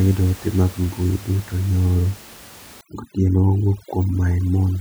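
A speech recording where overdone noise removal engages from 2.81 s to the end, cutting bands near the noise estimate so the background drops and breaks into twinkling specks over the room noise, about 22 dB down.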